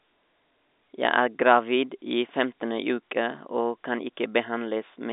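Nothing's amiss here; it's a bit of speech carried over an ordinary telephone line, so the sound stops at about 3.8 kHz, just as a line like that would have it.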